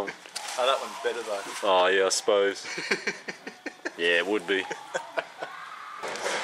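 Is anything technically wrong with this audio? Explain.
No, nothing technically wrong stood out when listening to this audio.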